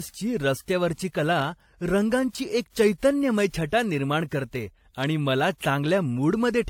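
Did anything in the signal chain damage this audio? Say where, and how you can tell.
Yes, at the codec stage, across the whole speech clip. There's a mix of two different flavours of compression smear, and nothing above 19.1 kHz. That's likely transcoding between lossy codecs: the sound points to AAC at a low rate, then WMA re-encoding its artefacts.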